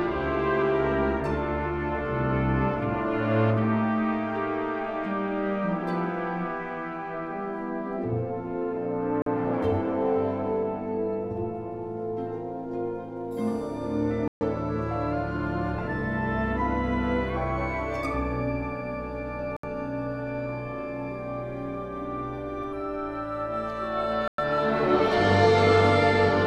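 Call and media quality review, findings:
Bluetooth stall, four dropouts to silence: 9.22–9.26 s (43 ms), 14.28–14.41 s (132 ms), 19.57–19.64 s (69 ms), 24.28–24.38 s (105 ms). Probable component: wireless link, likely interference delaying packets until the headset buffer emptied and playback paused for the retransmissions. Audio resumes at or just past the break point. Waveform: flat silent gaps with hard edges. Spectrogram: full-band vertical blank strips.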